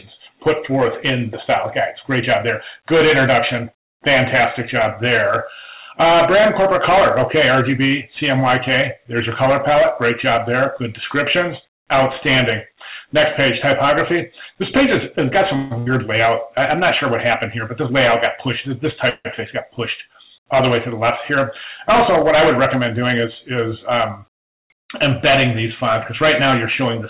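Hard clipping runs through the whole clip: the level is driven about 18 dB past what the chain can pass, so around 7 percent of samples go over and are sliced flat. Those flat tops add harmonics that turn every loud stretch into a harsh, gritty fuzz.

A call audio freeze follows from 15.56 to 15.73 s. The last sound is stretched into a fading buzz or hiss for 147 ms, then the audio picks up exactly where it stopped, nothing lost. Packets were likely held up until the jitter buffer ran dry.

Right after, from 15.79 to 15.88 s, a burst of packet loss removes about 80 ms. The receiver fills roughly 76 ms by extending and fading the preceding sound, then jumps ahead, leaving a skip where that stretch of audio should be.

A second call audio freeze hits from 19.09 to 19.27 s, lasting 155 ms. This time the held sound dies away into 50 ms of silence before resuming seamlessly. A stalled delivery that emptied the buffer is the likely cause.

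A jitter buffer speed-up runs from 22.41 to 23.63 s. The receiver had a surplus of buffered audio and trimmed it away in many short pitch-period slices, about 50 ms in total. Playback runs roughly 4 percent fast, without any pitch shift.

All of this sits on a narrowband call path with nothing above 4 kHz, which fits a 64 kbps G.711 mu-law link.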